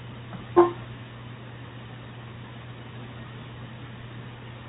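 No technical faults are audible.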